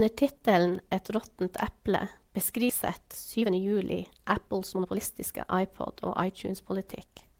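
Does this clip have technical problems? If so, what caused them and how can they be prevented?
Yes. At about 2.69 to 2.71 s there is a skip ahead. The jitter buffer had already received later audio and discarded roughly a second of sound, either lost in transit or dropped when the buffer overflowed. Playback therefore leaps forward with no gap at all: the sound before and after the jump is spliced almost directly, and about a second of material is simply missing. Sizing the buffer to absorb bursts, and concealing losses rather than discarding queued audio, would prevent this.

Two stretches show jitter buffer speed-up. The buffer held more audio than its target, so the receiver repeatedly cut out short pieces one or a few pitch periods long to shrink the delay. From 2.99 to 5.56 s the speech runs at about 117% speed, with roughly 400 ms removed, and sounds noticeably hurried while the pitch stays the same. 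From 6.09 to 7.34 s the rate is a milder 104%, removing only a few tens of milliseconds. Smoother network delivery and a gentler, slower delay-reduction policy would prevent this.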